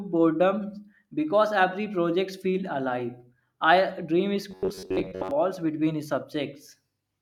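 From 4.51 to 5.31 s, after "feel alive I dream", robotic sound from repeated short buffers turns speech into a rigid 93.8 Hz buzz, likely from looping a roughly 11 ms chunk. The spectrogram shows flat, evenly spaced harmonic lines.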